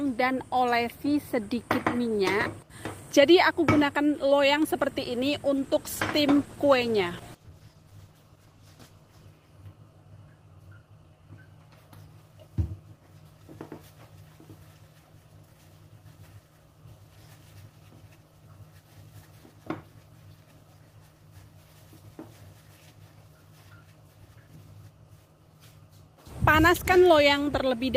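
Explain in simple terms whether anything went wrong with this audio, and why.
From 5.59 to 9.35 s there is a call bitrate drop: the connection briefly squeezed the audio into far less data, so the sound turns coarse and muffled until it recovers.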